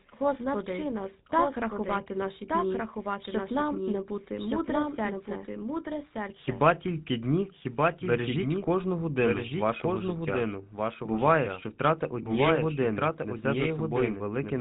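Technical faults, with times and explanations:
Throughout, doubled audio track: a second full-band copy trails about one second behind, roughly 5 dB quieter, likely from a slower capture path. Waveform shows repeated, offset envelopes.
Throughout, GSM full-rate codec: buzzy, gravelly roughness from pulse-driven vocal-tract modelling, fitting a 13 kbps stream. Spectrogram shows a hard ceiling at 3.8 kHz.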